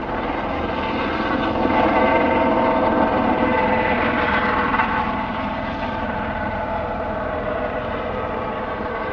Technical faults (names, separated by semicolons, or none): none